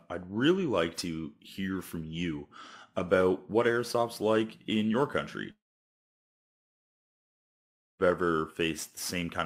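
A long network dropout likely stopped audio arriving at 5.51 s, after "airsoft's like in your". The last sound briefly smears into a fading buzz, then about 2.4 s of silence follows, and speech resumes at 8.02 s with roughly 2.5 s missing.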